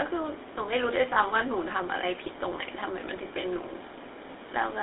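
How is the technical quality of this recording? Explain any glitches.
Poor, with a narrow telephone-grade sound and two brief glitches.

Throughout, the speech sounds buzzy and gravelly, confined to roughly 300 Hz to 3.7 kHz. That is GSM full-rate codec damage: regularly pulsed excitation through a vocal-tract model, consistent with 13 kbps.

From 1.14 to 1.18 s and from 3.28 to 3.31 s, brief metallic rings interrupt the sound. These are lost GSM frames, each pointing to a single 20 ms frame, with the last good frame repeated.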